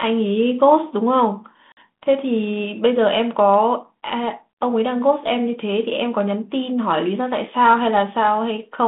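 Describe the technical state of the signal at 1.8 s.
At 1.8 s the signal is coming out of a packet loss on an ADPCM call. From 1.72 to 1.77 s about 50 ms of audio drops out, roughly five packets, and is replaced by a hard-edged silence. The decoder's adaptive predictor and step size then no longer match the sender's. So the speech resumes slightly distorted before settling. The G.726 ADPCM line itself sounds as expected, band-limited to about 150 Hz to 3.6 kHz.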